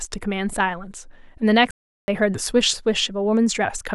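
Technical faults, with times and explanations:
1.71 to 2.08 s, playback stall: the player likely ran short of buffered data, or its output thread was held up, so for about 370 ms nothing reached the sound device and the output fell to silence. The speech breaks off in mid-flow rather than at a natural pause, which is why the gap sounds abrupt and mechanical instead of like a breath or hesitation. It then picks up again at 2.08 s.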